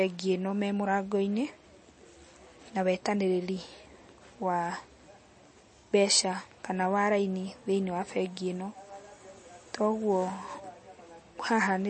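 Speech, likely passed through heavy MP3 compression at a rate suggesting around 32 kbps. The encoder discards everything above 8.4 kHz and drops weak frequency lines, leaving plainly audible dull, watery sound throughout.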